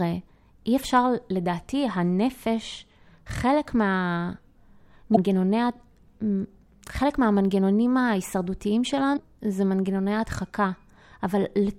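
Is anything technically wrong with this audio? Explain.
Yes. This speech clip has damaged data in a compressed stream, twice. At 5.13 to 5.18 s and 9.13 to 9.18 s, corrupted bytes make the decoder misread frames and resync. Each gives a brief glitch about 50 ms long.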